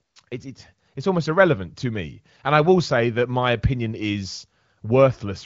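No faults are audible in this speech, whose band stops near 7.5 kHz as the wideband AMR (HD Voice) codec sets it, with the clarity fitting a rate around 18 kbit/s.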